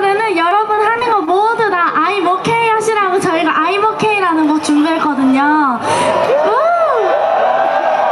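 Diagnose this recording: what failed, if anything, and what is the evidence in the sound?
Repeated packet loss (robotic sound) from 0.49 to 1.29 s, a network-stage failure. Five short dropouts, the longest 22 ms, were each filled by extending the preceding audio, so about 12% of that stretch is concealment, leaving it choppy with pieces missing.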